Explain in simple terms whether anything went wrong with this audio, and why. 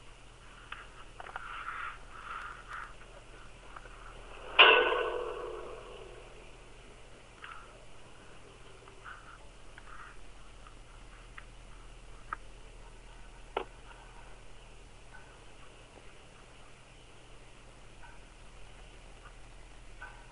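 The whole clip has a wrong sample rate fault, from start to finish. Everything plays at two thirds of its proper speed and sounds about seven semitones lower. That fits audio made at 48 kHz being played back at 32 kHz without conversion.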